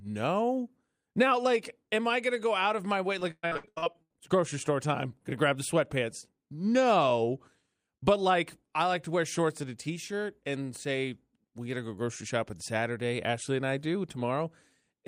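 From 3.19 to 4.12 s the speech turns choppy, with a robotic, stuttering quality and pieces of sound simply gone. This is repeated packet loss (robotic sound). Audio data kept arriving late or not at all, and each hole was patched by stretching out the last good sound before the next dropout hit. Roughly half a second was filled this way, the longest single gap lasting 120 ms, so concealment covers about 55% of the stretch.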